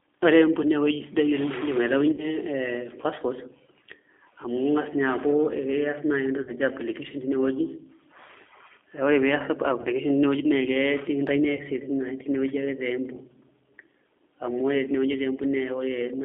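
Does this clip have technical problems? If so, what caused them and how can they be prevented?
Yes. The whole clip has been through the G.729 codec, an 8 kbit/s voice coder that rebuilds speech from a vocal tract filter, a pitch predictor and a sparse pulse pattern instead of the waveform itself. The result is plainly rough and slightly synthetic. On a spectrogram, energy stops sharply at about 3.5 kHz and thins below 300 Hz, the band of a telephone line, and the harmonics look smeared. Preventing this means choosing a wideband codec such as Opus or G.722 instead of G.729.

There are also four dropouts from VoIP packet loss concealed by the speech codec, at 2.12 to 2.30 s, 6.43 to 6.51 s just before "application tinewueji", 9.81 to 9.92 s right after "naa ore pee ias", and 11.57 to 11.61 s. The gaps are about 60, 40, 40 and 20 ms long, consistent with one to three lost 20 ms packets. The decoder fills each gap by repeating its last pitch and filter at falling gain, so a buzzy tone or coloured noise that fades replaces the speech. 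On a spectrogram this looks like flat, stretched harmonic bands, and on a waveform like a decaying envelope that takes a moment to recover. Jitter buffering, forward error correction or a more reliable network path would prevent these losses.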